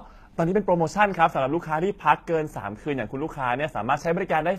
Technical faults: HE-AAC compression

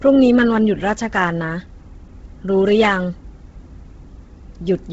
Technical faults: Bluetooth LC3 compression

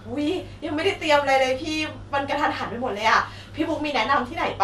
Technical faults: MP2 compression; DAB burbling

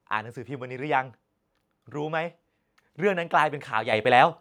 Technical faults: microphone volume stepped up

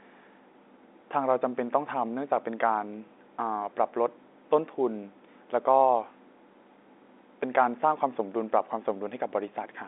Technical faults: none

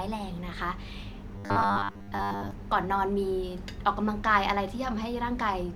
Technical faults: robotic sound from repeated short buffers

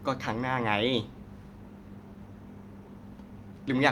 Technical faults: none

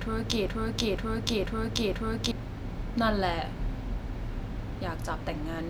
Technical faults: broken-record loop

